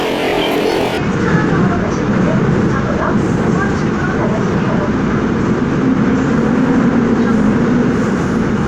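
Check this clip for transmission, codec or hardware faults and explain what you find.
One fault is present: planar audio read as interleaved, from 0.0 to 1.0 s. Each block of about 46.4 ms, which fits a 2048-sample block, is read as alternating pairs, so the left half and then the right half each play at double speed. The sound jumps an octave high with a flutter at about 21.5 Hz. A spectrogram shows harmonics shifted up an octave and chopped into regular 46 ms segments, and the waveform repeats in short, compressed halves.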